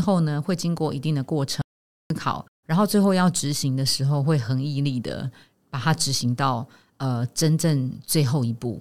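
At 1.62 s the speech cuts out into an audio dropout to silence lasting about 0.49 s, until 2.10 s, likely from the input briefly disconnecting while recording continued. It sounds dead, with no room tone, and appears as a flat-line waveform and blank spectrogram column.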